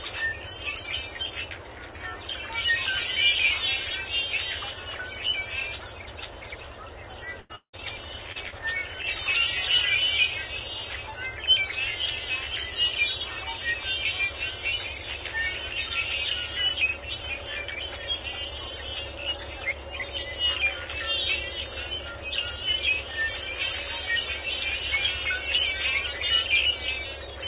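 A recording of everyday sounds heard through a call path, band-limited to 4 kHz in the way of G.711 A-law. At 7.40 to 7.51 s there is a burst of packet loss. The last sound is stretched and fades for about 90 ms, and about 100 ms is skipped. From 7.55 to 7.75 s the sound smears into a fading continuation, then about 80 ms of silence, with about 180 ms lost. That is likely a long network dropout. Short concealed packet loss follows at 8.32 to 8.37 s, 8.49 to 8.54 s and 9.02 to 9.05 s. Each gap is patched with a brief smear or wobble.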